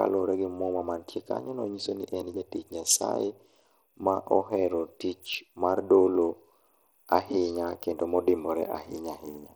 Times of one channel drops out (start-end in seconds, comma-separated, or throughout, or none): none